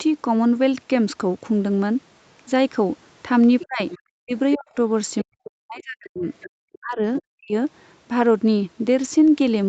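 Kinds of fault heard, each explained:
Other side's voice leaking through: a second, quieter voice surfaces in short scraps at 3.6–3.98, 5.22–5.47, 6.41–6.78 and briefly at 7.2 s, sitting roughly 15 to 25 dB under the main talker; likely the far end's loudspeaker sound that the echo canceller did not fully remove.
Speech suppressed in double talk: the main voice sinks sharply, by as much as about 40 dB, at 3.65–3.81, 4.19–4.76, 5.23–6.26 and 6.79–7.54 s; likely the echo canceller, unable to separate both talkers overlapping, clamped down on everything.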